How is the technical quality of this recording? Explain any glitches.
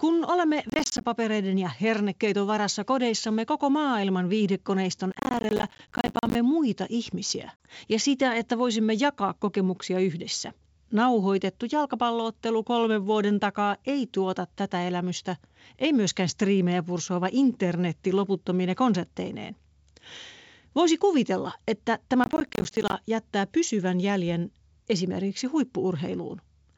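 The recording is a wideband G.722 phone capture at 64 kbit/s, with clear upper frequencies, and it has four audible glitches of two kinds.

Processor overload crackle occurs at 0.70–1.04 s, just before "ja hernekeiton varassa kodeissamme"; at 5.12–6.35 s, between "kodeissamme koko maailman viihdekoneiston" and "muita ihmisiä ja sitä"; and at 22.24–22.93 s. Dozens of missed deadlines, consistent with roughly 10 ms buffers, each leave a short silent gap, which produces a gritty, rapid crackle. The sustained clustering separates it from a single dropout.

Packet loss on an ADPCM call occurs at 7.57–7.65 s, between "muita ihmisiä" and "ja sitä että voisimme". About 40 ms of audio, likely a couple of packets, became a hard-edged silence. The speech then returns briefly distorted as the decoder's predictor resynchronises, which distinguishes it from crackle.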